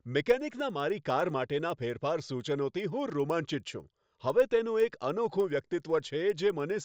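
From start to finish the speech carries a resampler restarted on every block: the 16 kHz to 48 kHz conversion was run on 100 ms blocks in isolation, so each block edge was filled with wrong neighbouring samples. The result is a steady tick at 10 Hz that sounds only while speech is present and drops away in pauses. A spectrogram shows thin vertical broadband lines spaced 100 ms apart over voiced regions; the waveform shows small steps at those boundaries.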